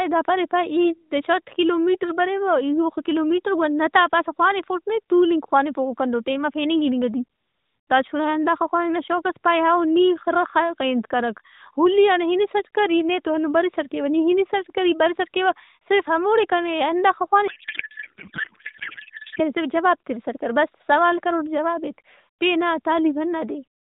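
From 17.48 s to 19.41 s the speech gives way to garbled noise and warble that barely tracks it, before speech returns at "کنے صرف جواب تِرِسٹ". This is a codec payload misread: frames packed in octet-aligned AMR were unpacked as bandwidth-efficient, so the decoder read every field from the wrong bit positions. The surrounding narrowband AMR audio, consistent with 12.2 kbps, shows only light coding damage.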